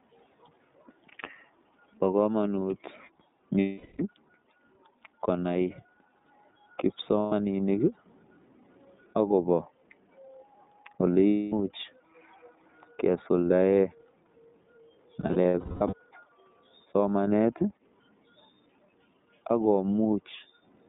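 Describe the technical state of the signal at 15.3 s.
At 15.3 s the speech is inside a burst of lost iLBC frames (15.21–15.94 s). The decoder repeats the last pitch cycle with added noise, so each gap becomes a held, buzzy vowel, the longest about a fifth of a second. Unlike a plain dropout the gap is filled, and clean speech resumes almost at once. Underneath, the iLBC codec holds the band to about 150 Hz–3.7 kHz, with a rough, synthetic grain present throughout, not only here.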